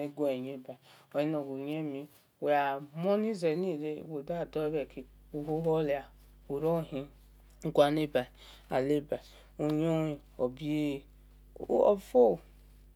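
Mains hum enters at 4.2 s and persists to the end of the speech: a steady 50 Hz tone with low harmonics, sitting roughly 25 dB below the signal. It points to a ground loop or nearby transformer coupling the power line into the audio path.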